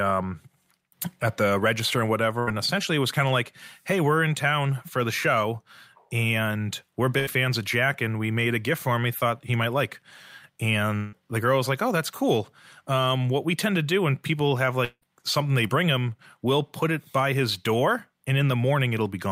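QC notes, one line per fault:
2.39–2.49 s and 7.19–7.29 s, burst of packet loss. Each time the sound stalls on a fading continuation of the last sound for nearly 80 ms. About 80 ms of audio then goes missing, and the sound jumps ahead. The receiver kept extending the last sound it had, turning it down as the gap went on. The two events match closely.
10.97–11.15 s and 14.85–15.04 s, long network dropout. These are longer stalls, about 160 ms and 180 ms of audio missing. The first is filled all the way with a decaying continuation of the last sound and has no true silence. The second carries the fill for about 170 ms, then leaves roughly 50 ms of silence before the sound returns further on. The likely cause is a longer break in arriving audio, too long for concealment to bridge.
15.68–15.71 s, short concealed packet loss. This is a brief smear or wobble rather than a gap. About 20 ms of audio never arrived. 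The receiver patched roughly 11 ms by continuing the last sound, then blended back into the real audio. It is short enough to pass as a small wobble.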